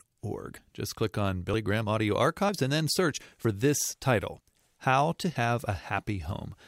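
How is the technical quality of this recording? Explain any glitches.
The recording has one glitch, at 3.45 s. Between "and then search" and "this title" the speech skips abruptly, losing about 40 ms. It is likely audio missing between chunks, dropped at a 1-second chunk boundary.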